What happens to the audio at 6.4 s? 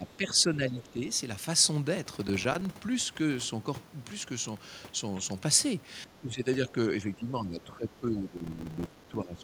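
Speech suppressed in double talk runs from 6.05 to 6.77 s, with 6.4 s near its middle. The speech sinks in level, by about 10 dB at its deepest, and is held down for roughly half a second in total across that span. The likely cause is an echo canceller facing talk from both ends at once: unable to tell the near talker from the far side's loudspeaker echo, it attenuated everything it picked up.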